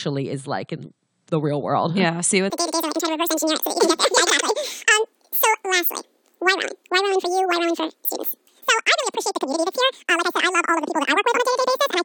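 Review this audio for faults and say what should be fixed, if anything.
From 2.5 s to the end of the clip, the audio has a wrong sample rate fault: it runs at twice its proper speed and sits a full octave (12 semitones) high, with duration and pitch shifted together. That combination fits material recorded at about 22 kHz being played back at 44.1 kHz with no conversion. The samples are read out twice as fast as they were captured. The fix is to resample that section to the playback rate. To prevent it, tag each file with its true sample rate and resample whenever that differs from the device or project rate.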